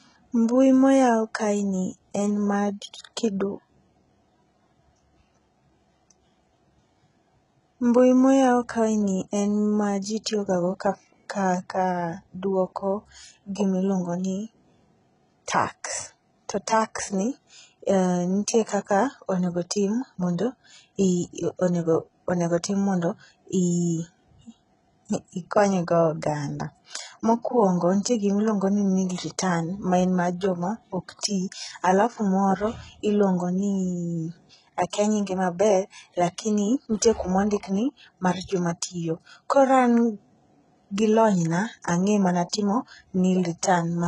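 Throughout the speech, the treble has a gritty, metallic edge, and s sounds come out lispy and smeared. The pattern points to heavy HE-AAC compression, likely at a very low bitrate around 12 kbps, where only the lower spectrum is truly coded and the top is rebuilt by spectral band replication. A spectrogram would show a hard ceiling at 11.1 kHz, with the upper band looking like blocky, repeated copies of the lower harmonics that don't line up with them.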